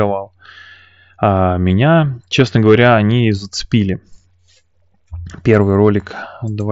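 At 1.69 s the speech has a brief concealed Bluetooth headset packet loss of about 15 ms. The receiver bridged the missing packets by repeating a closely matching stretch of the preceding waveform. That fills the gap with a short buzzy tone at full level, with a small warble as normal audio resumes.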